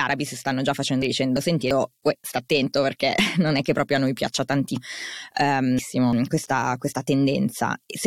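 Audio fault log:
1.02–1.71 s: chunks out of order. A 341 ms chunk plays one slot late, after the chunk that should follow it. The sound jumbles briefly across three hard joins.
3.75 s: overlap between stream segments. At a 4-second segment boundary, a few milliseconds of non-doubled sound are trimmed away. The waveform jumps, heard as a tiny skip.
4.76–6.13 s: chunks out of order. A 341 ms chunk arrives three chunks late and plays after them. This longer stretch sounds scrambled, with three hard joins.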